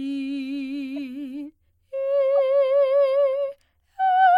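Music, with two short bursts from a corrupt frame decoded: at 0.96 to 0.98 s and at 2.38 s, a couple of damaged compressed frames were played anyway, scattering energy into wrong frequencies. Each shows as a brief smear or stripe on a spectrogram, peaking around -30 and -25 dBFS respectively.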